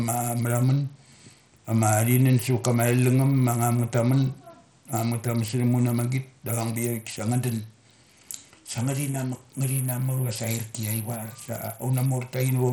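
A speech clip with plainly audible Bluetooth SBC compression throughout, likely from a starved bit pool that fits roughly 80 kbps. Nothing is left above 18.8 kHz, and the treble flickers under gritty, aliased noise rather than the swirly, watery smearing of MP3-style codecs.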